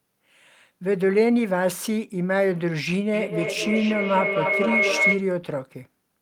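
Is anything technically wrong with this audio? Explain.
Yes. A feedback howl runs from 3.13 to 5.28 s: a microphone-to-loudspeaker loop gaining level each trip builds a tone near 2 kHz, pulsing roughly every 300 ms, reaching about speech level.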